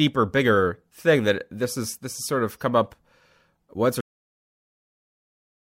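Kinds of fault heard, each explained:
Cut-off end: at 4.01 s, just after "once or", the speech stops mid-sound into digital silence with no decay because the final buffers never got written.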